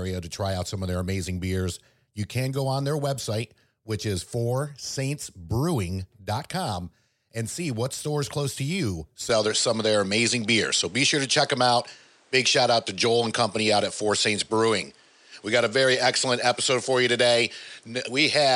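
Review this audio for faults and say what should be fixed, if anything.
At 9.29 s, right after "stores close to you", the speech turns duller and shifts in level by around 5 dB with no gap at the change, and this lasts to the end of the clip. Nothing remains above 10.3 kHz, and a faint new noise floor sits roughly 40 dB below the speech. This is likely an input switched to a poorer device mid-recording, whose narrower band and own gain and hiss replaced the original microphone's. Locking the input device for the whole session would prevent it.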